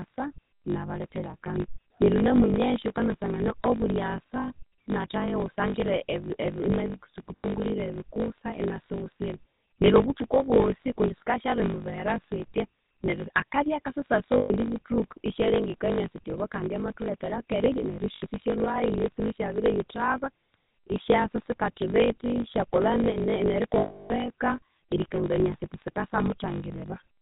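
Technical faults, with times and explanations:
Throughout: block size mismatch (truncated). A steady 50 Hz buzz runs under the speech. Each block loses its tail before the next stage reads it. This fits blocks of 1024 samples being cut short. The speech runs 1.16 times fast at about normal pitch.
Throughout: GSM full-rate codec. The speech is buzzy and gravelly, and nothing sounds above 4 kHz. The coder keeps only a sparse pulse excitation through a vocal-tract model. The damage is plainly audible and fits the 13 kbps full-rate coder.
7.37–7.53 s, 14.38–14.51 s, 18.16–18.23 s, 23.78–24.11 s: lost GSM frames. The sound freezes into a rough metallic ring. The decoder repeats the last good frame at falling level. At 7.37 s, just before "ebikusa inasiwusira neryo obuthuku", 0.12 s of losses are scattered across 0.16 s, in short runs. At 23.78 s the gap is 0.32 s.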